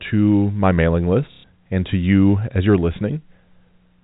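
At 1.32 s, right after "to my mailing", packet loss with the last packet repeated cuts in for 120 ms, until "and to you as" resumes at 1.44 s. The receiver looped one stale chunk in place of the missing audio, which fits four 30 ms packets. The stretch buzzes robotically at about 33 Hz. A waveform shows an identical block tiled end to end. A spectrogram shows frozen, repeating harmonics, all within the 4 kHz ceiling of the G.711 telephone coding.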